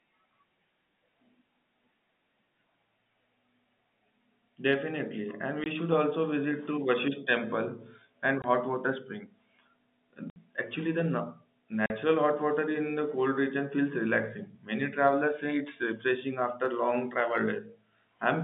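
Speech over a phone-style line (the narrow telephone band from the G.711 coding is audible) with packet loss filled with silence: hard-edged gaps at 5.64–5.66 s before "should also visit to", 8.42–8.44 s between "temple and" and "hot water spring", 10.30–10.36 s, and 11.86–11.90 s before "hot water". Gaps of 20, 40 and 60 ms fit lost 20 ms packets replaced by silence.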